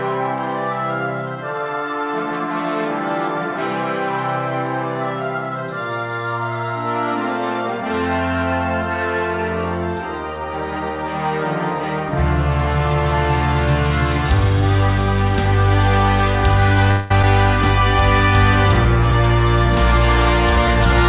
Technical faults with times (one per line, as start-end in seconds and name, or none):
16.91-17.11 call audio freeze
17.22 skip ahead